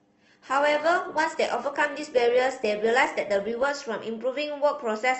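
From the start until 3.7 s the speech has the signature of an adaptive stream starting at a low bitrate: the treble is thin or synthetic-sounding and coding artefacts are prominent, which fits a low-rate encoding around 16 kbit/s Opus. The player began on a cheap rendition to start quickly, then switched once it had gauged the connection. At 3.7 s quality jumps abruptly, with no gap, to something consistent with roughly 64 kbit/s.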